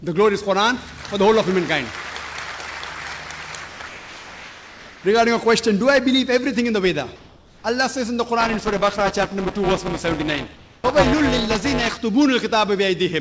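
Comfort noise in place of the background appears first at 3.68 to 3.80 s, then at 3.88 to 5.04 s, 7.16 to 7.64 s and 10.56 to 10.84 s. In each gap the real background, with its small detail, gives way to a steady, featureless hiss about 2 dB quieter (about 1 dB at 10.56 s). The likely cause is discontinuous transmission: the sender goes silent when no activity is detected, and the receiver fills the pause with synthetic noise.

Buffer tearing runs from 8.40 to 11.97 s as a robotic buzz at 200 Hz, present only while there is signal. The writing and reading sides of a ring buffer have drifted so they cross inside every period. Roughly 15% of each chunk is stale audio from about a lap earlier, with hard joins on both sides. The 200 Hz rate points to a 5 ms buffer period. The call codec path is audible as a band limit, with nothing above 8 kHz.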